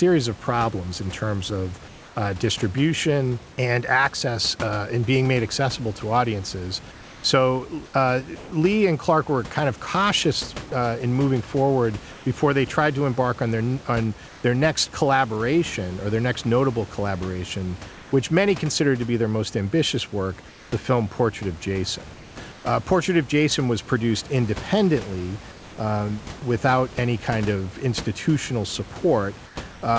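A speech recording over a call path that keeps nothing above 8 kHz, which fits G.722 at 64 kbps, with room noise about 22 dB below the voice. Comfort noise in place of the background appears at 1.88 to 2.16 s, between "problems in terms of" and "uh distribution and access": for 280 ms the real room tone gives way to a steady, featureless hiss about 3 dB quieter. It returns after "their next notable collaboration", where roughly 0.78 s between 17.92 and 22.64 s is replaced, and for 200 ms at 29.46 to 29.82 s. The likely cause is discontinuous transmission, with the receiver synthesising noise during pauses. It differs from a dropout because the gap holds smooth noise rather than silence, and it sits only in pauses. Sound chopped by the voice detector, from 6.92 to 14.44 s, after "made accessible to audiences" and before "their next collaboration or", is different. There the sender likely toggled transmission on and off repeatedly, so about 880 ms in total, including quiet syllables and word edges, is swapped for fill. 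The speech sounds choppy.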